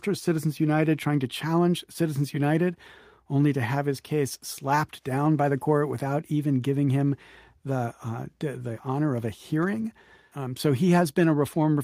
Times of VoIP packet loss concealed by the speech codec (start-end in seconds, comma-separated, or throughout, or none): none